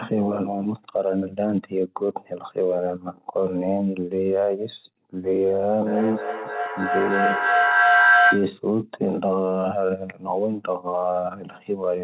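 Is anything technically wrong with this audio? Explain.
Yes. From 5.86 to 8.56 s there is a feedback howl. A microphone and loudspeaker on the same call loop sound back with gain, so repeats grow. It narrows to a tone around 1.5 kHz, repeating roughly every 300 ms and peaking about 7 dB above the speech. The band stops at 4 kHz, which fits a narrowband telephone codec.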